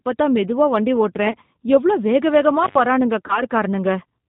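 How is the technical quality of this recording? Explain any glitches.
Technical quality is fairly poor: the whole thing has that narrowband VoIP sound, and there are three short glitches on top of it.

Throughout, the speech carries the character of the G.729 codec, and the damage is plainly audible. The sound fits G.729A at 8 kbit/s, where the decoder rebuilds each 10 ms frame from a vocal tract filter, a pitch predictor and a handful of pulses rather than sending the waveform itself. Nothing above 4 kHz survives, so the voice sounds boxed-in and dull, with a slightly rough, synthetic edge.

Two spots show VoIP packet loss concealed by the speech codec. The first runs from about 1.31 to 1.35 s, with a gap of about 30 ms that fits three lost frames. The second runs from about 3.27 to 3.42 s, where about 20 ms went missing, consistent with two frames. In both, the decoder keeps extrapolating from its last pitch and filter while the gain drops away, so the voice is stretched into a brief buzzy tone or coloured noise that fades. 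Because each frame builds on the previous one, it stays a bit weak and distorted for a moment after audio resumes. That explains why the second event spreads well past the 20 ms actually lost.

Between those, from 2.63 to 2.78 s, there's an intermittent contact dropout. A connection briefly opens for about 92 ms, so the sound cuts out with little crackles at the break and reconnect, and faint hiss fills the hole while the line is open.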